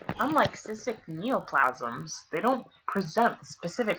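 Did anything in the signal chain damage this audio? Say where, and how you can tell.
Yes. A block size mismatch (padded) at the driver or buffer stage causes a steady 46.9 Hz buzz throughout. Zero-filled gaps fit a 1024-sample read buffer.

A section at the wrong speed runs from 1.63 to 3.38 s at 0.893 times speed. Pitch drops about two semitones. The likely cause is a playback clock mismatch.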